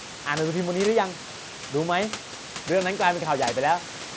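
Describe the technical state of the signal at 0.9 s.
At 0.9 s the signal is intact, with no fault present, only the band limit at 8 kHz from the call and headset path and room noise about 17 dB below the speech.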